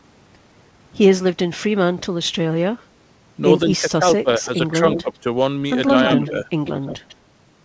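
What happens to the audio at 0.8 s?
At 0.8 s the speech carries on intact with no dropout, glitch or distortion, and like the rest of the call path it simply has no content above 8 kHz, which points to a wideband call codec such as G.722.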